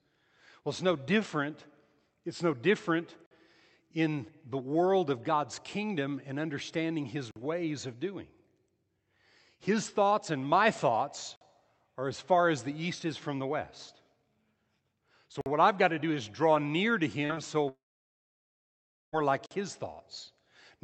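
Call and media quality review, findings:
Gap between chunks: short, hard-edged holes of silence, each 50 ms, at 3.26, 7.31, 11.36, 15.41 and 19.46 s, spaced about every 4 s. The one at 7.31 s falls between "kingdom and understanding his" and "ways of doing", and the one at 15.41 s comes just before "what I've got to". The regular spacing points to audio delivered in roughly 4 s chunks, with playback leaving a fixed dead gap at each join. Nothing is lost, but the flow breaks audibly every time.

Short concealed packet loss: two brief smeared, wobbly blips, at 17.25 s (about 55 ms) and 17.35 s (about 40 ms). Component: the receiver's loss concealment. Audio arrived too late for the decoder, which bridged each hole by extending the preceding sound, then cross-faded back into real audio. This blurs the detail in those few hundredths of a second.

Long network dropout: at 17.69 s the sound turns into a short, fading synthetic continuation, then near-silence until 19.15 s, about 1.46 s in all. 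It resumes at "like his", and the missing stretch never returns. The likely cause is a network outage. Concealment briefly extended the last sound and then gave up, leaving about 1.34 s of silence. Through the Opus call path, the audio is band-limited to about 8 kHz.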